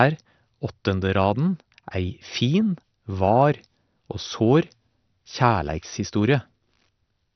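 A speech recording with heavy MP2 compression running throughout, likely from low-rate MPEG Layer II coding that fits roughly 48 kbps. Nothing survives above 6.2 kHz, so it sounds dull, while starved sub-bands flicker and gurgle granularly, unlike a clean low-pass filter or MP3's swirly pre-echo.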